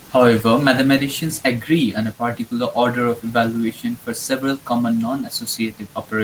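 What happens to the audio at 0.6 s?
Nothing goes wrong at 0.6 s: the speech carries straight through that moment with no dropout, click or distortion, and the Opus voice compression it passes through holds up there.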